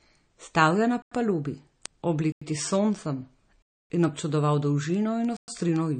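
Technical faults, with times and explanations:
Throughout, MP3 compression: a watery, swirly texture with nothing above 9.1 kHz, likely from encoding at a low bitrate around 34 kbps. It is steady, unlike intermittent dropouts.
0.15 s to the end, word clock ticks: sharp ticks at about ten per second, each a single slipped sample. This fits an unlocked digital link drifting by a couple of hundred parts per million. The regular spacing sets them apart from random clicks.
1.02–1.12 s, 2.32–2.42 s, 3.62–3.90 s, 5.37–5.48 s, block of digital silence: the sound drops to silence and returns without fading. The gaps last 93 ms, 93 ms, 279 ms and 114 ms, and the two matching 93 ms holes fit a 4096-sample buffer left unfilled.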